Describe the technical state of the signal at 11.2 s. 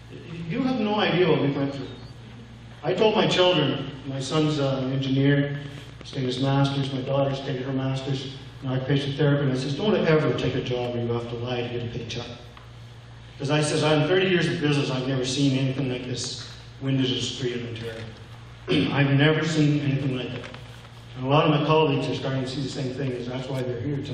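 At 11.2 s the signal is intact, with no dropout, distortion, glitch or other fault.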